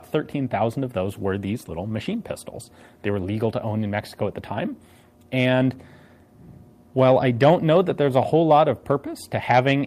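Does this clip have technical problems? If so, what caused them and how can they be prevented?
No, the signal shows no technical faults anywhere in the clip.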